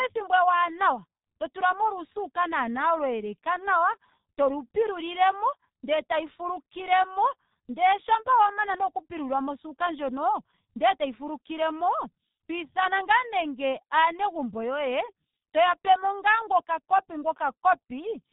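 Throughout the speech, heavy G.723.1 codec damage: low-rate 30 ms frames leave it muffled and hoarse, with smeared consonants; a spectrogram shows nothing above 3.8 kHz.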